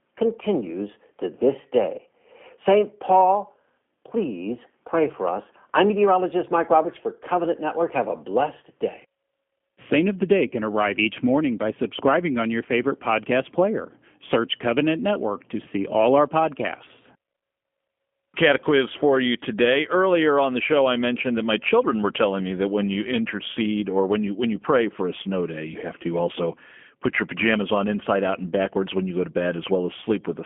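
G.729 codec damage runs through the whole speech clip, and its roughness points to a low-rate codec around 8 kbit/s. Each 10 ms frame is rebuilt from a vocal-tract model and sparse pulses, so the voice sounds plainly buzzy and synthetic, confined to 200 Hz to 3.4 kHz.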